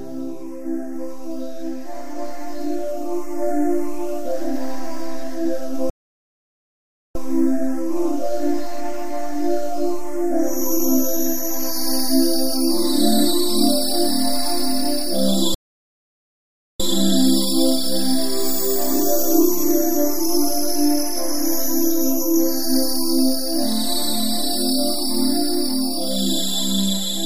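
Two playback stalls cut the audio dead for about 1.25 s each, at 5.90–7.15 s and 15.54–16.80 s, likely the player starving for data or blocking.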